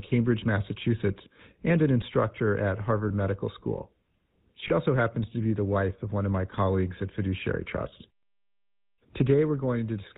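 From start to finish the speech carries the plainly audible signature of the GSM full-rate codec: a buzzy, gravelly roughness and nothing above 4 kHz. The codec keeps a model of the vocal tract and drives it with a sparse train of regularly spaced pulses, so harmonics come out coarse and grainy. This fits the 13 kbps full-rate coder, and is unlike the smeared, warbling texture of a modern low-bitrate codec.

At 3.08–3.11 s, just after "and an instructor at", lost GSM frames cause a brief metallic ring. The decoder filled the gap by repeating the last good frame's settings. The gap points to a single lost 20 ms frame. A second instance at 4.68–4.72 s, just before "also happens to be", sounds the same. Both are too short to fade out, and the ringing hold, not a click or a silent dropout, sets them apart from ordinary packet gaps.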